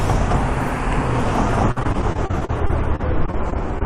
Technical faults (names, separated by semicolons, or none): repeated packet loss (robotic sound)